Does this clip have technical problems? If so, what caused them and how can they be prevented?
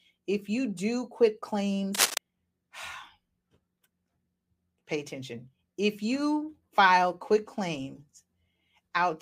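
Yes. A worn cable or connector was likely moved, its contact resistance fluctuating and producing cable scratch noise from 1.94 to 2.18 s, just after "if you do quit": rough scratching about as loud as the speech. Replace worn leads and connectors, and keep cables still while recording.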